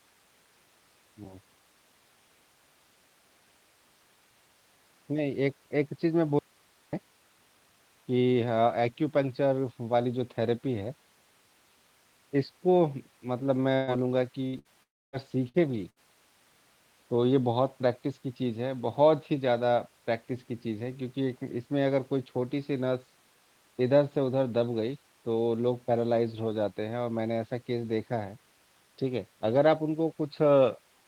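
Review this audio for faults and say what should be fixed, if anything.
An audio dropout to a faint residue runs from 6.39 to 6.93 s. For about 0.54 s the sound falls abruptly to hiss roughly 35 dB down, likely a momentary input or connection loss. Secure the cabling and input path so the signal cannot momentarily disconnect.

A burst of packet loss occurs at 13.75 to 13.90 s (about 120 ms), 14.47 to 14.56 s, 14.59 to 14.68 s, 15.49 to 15.57 s and 15.90 to 15.99 s (about 60 ms each). At each, the last sound is held and faded, then the audio jumps ahead. Add forward error correction or a larger jitter buffer to absorb short loss bursts.

A long network dropout runs from 14.83 to 15.16 s. Concealment fades out into roughly 0.26 s of silence, and about 0.3 s of audio is skipped, likely from a stall in delivery. Use a more stable network link, preferably wired, with enough bandwidth headroom.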